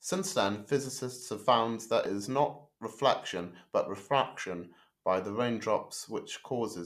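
No faults are audible anywhere in the recording.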